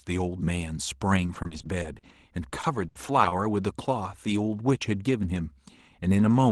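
Repeated packet loss (robotic sound) runs from 1.16 to 2.10 s and again from 2.49 to 3.43 s. Short holes in the stream, up to 40 ms and then 70 ms long, are bridged by stretching the preceding sound, giving choppy speech with fragments missing.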